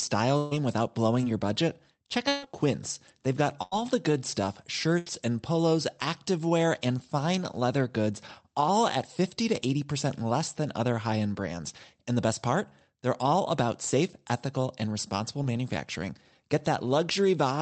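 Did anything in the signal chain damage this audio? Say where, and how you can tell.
Yes, the network stage damaged it. Repeated packet loss between 0.37 and 2.44 s gives choppy, robotic speech: three gaps, the longest 138 ms, each patched by extending the previous sound.

A burst of packet loss hits at 3.62 to 3.77 s and 4.98 to 5.07 s. The receiver held and faded the last sound, which drops about 100 ms and 80 ms of speech.

Short concealed packet loss at 15.43 s leaves a brief smear. The decoder extrapolated over roughly 20 ms that arrived too late, then blended back.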